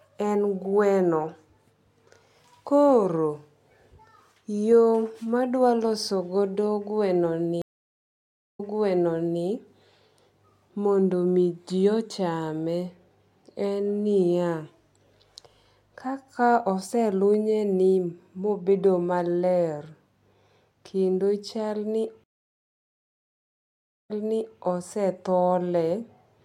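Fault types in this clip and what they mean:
Stream reconnect: the connection broke, playback went silent, and a fresh decoder picked the stream up again mid-flow. It happens twice in this speech, near 7.6 s and 22.2 s, with silences of about 0.96 s and 1.84 s. Each time the audio resumes earlier than where it stopped, by 0.86 s and 0.52 s, so a stretch of speech is heard twice. That repeat after a full silence is what separates it from a plain dropout, which resumes in place.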